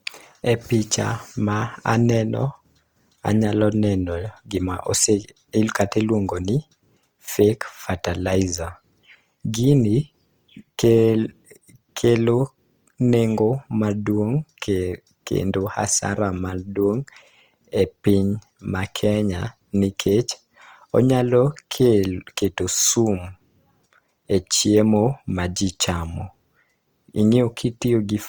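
Speech, likely passed through Opus compression in its music-oriented CELT mode at a low rate, with damage consistent with roughly 24 kbps. Starved bands are filled with folded or noise content, so throughout the clip the speech sounds plainly grainy and rough, though bandwidth reaches 20.2 kHz.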